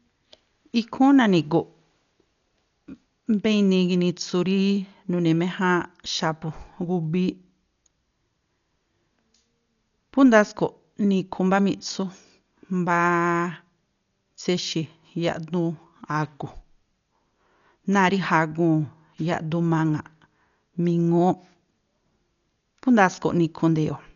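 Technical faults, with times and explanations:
Throughout: Dolby Digital compression, likely at a very low rate. The speech is dull, with nothing above 6.9 kHz, and a rough, fluttering noise surrounds tonal parts where frequency lines got no mantissa bits and were filled with dither. The heavy damage fits about 48 kbps.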